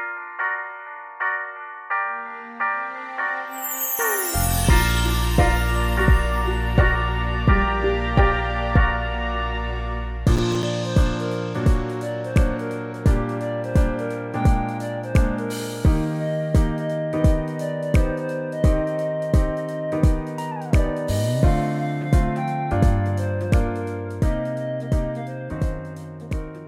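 The processor fell behind and missed a handful of its short audio buffers, each only a few milliseconds long, between 10.36 and 10.63 s. Each missed buffer left a hard-edged gap of silence, and together these gaps give a brief burst of processor overload crackle over the sound.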